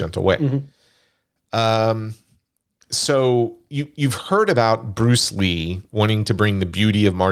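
A short speech recording with no audible technical fault anywhere in it. Nothing in the clip calls for a time, a value or a cause to be noted.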